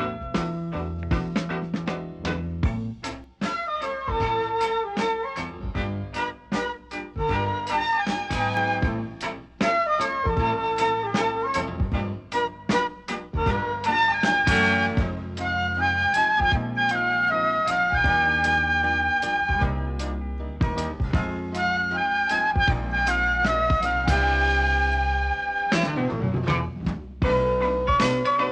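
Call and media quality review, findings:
Rough, slightly doubled sound from 3.24 to 8.57 s. Channel delay (comb filtering). One channel lags by around 20 ms before the mono sum. Cancellation notches start near 30 Hz and repeat evenly upward. Probable component: stereo downmix path.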